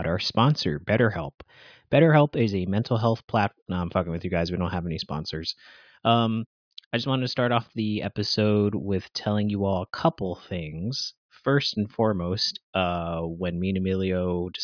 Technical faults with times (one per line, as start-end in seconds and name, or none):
none